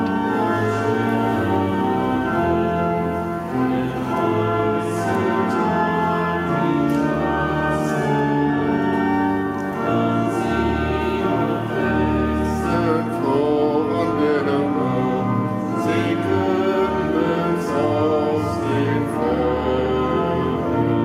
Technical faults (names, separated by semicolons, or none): none